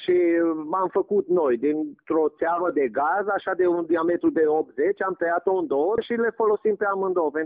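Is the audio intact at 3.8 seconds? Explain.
Yes, the audio is intact at 3.8 seconds, with no fault at that moment.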